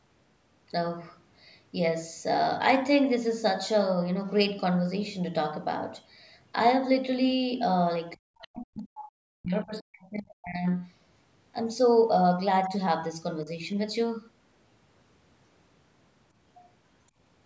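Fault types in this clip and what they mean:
Speech suppressed in double talk: speech sinks by around 40 dB at 8.14–10.67 s and dips slightly at 13.43–13.48 s, likely an echo canceller muting overlapping talk.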